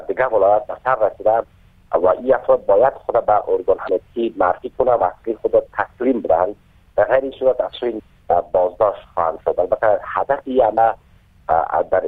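At 3.85 to 3.89 s, 7.96 to 8.00 s and 10.74 to 10.78 s, damaged data in the compressed stream makes the decoder misread frames and lose sync, giving brief 40 ms disruptions heard as a chirp, squawk, click or short hole. Each appears as a short break in the spectrogram and waveform.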